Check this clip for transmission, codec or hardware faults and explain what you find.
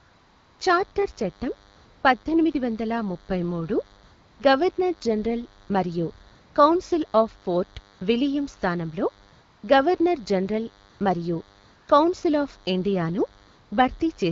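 Two faults are present: a continuous buzz and recurring patches of synthetic background.

DECT cordless phone buzz, throughout: a thin, steady buzz with a 100 Hz fundamental and many harmonics sits roughly 30 dB below the speech. A nearby DECT handset or base transmits a short radio burst every 10 ms, and the audio circuitry rectifies those bursts into audible sound.

AMR comfort noise, twelve times between 0.0 and 13.71 s: the real background gives way to smooth, even noise that switches in and out. These patches last from 20 ms up to about 0.59 s, the longest at the very start. During apparent silences the sending phone stopped transmitting speech frames, and the receiver generated noise from a rough level-and-spectrum description instead.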